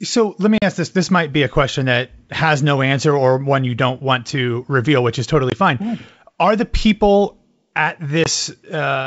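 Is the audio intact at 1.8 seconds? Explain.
Yes, the audio is intact at 1.8 s: no fault is heard there, with the speech carried cleanly over the G.722 wideband telephone path at 64 kbit/s.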